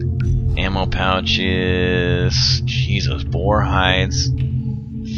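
Right near the end, from about 4.70 to 4.93 s, there's a patch of AAC frame loss with concealment. A short run of compressed frames went missing, roughly 170 ms of audio, which fits about four frames, and the decoder papered over the gap by reusing the last good spectrum with its phases scrambled. So instead of a dropout, you get a brief smeared, noisy, phasey blur where the sound should be.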